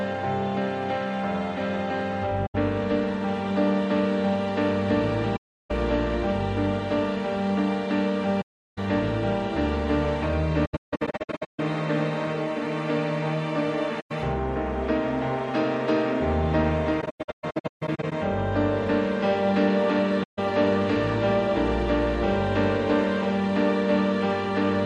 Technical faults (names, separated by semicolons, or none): AAC frame loss with muting